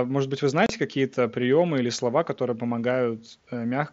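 Speech over a wideband mSBC headset link, with one fault: unconcealed Bluetooth headset packet loss from 0.66 to 0.70 s. About 30 ms of sound drops straight out with hard edges, which fits a few lost packets that got replaced with silence rather than patched over.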